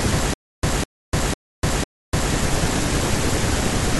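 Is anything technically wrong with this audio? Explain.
Yes. From 0.34 s to 2.34 s the speech breaks into a stutter with silent gaps. A short fragment of about 204 ms plays, then about 297 ms of dead digital silence follows. The same fragment returns four times at an even 500 ms pace. The likely cause is a stalled player or stream. At each retry it replays its last buffered piece and then runs dry. The speech that belonged in those two seconds is lost.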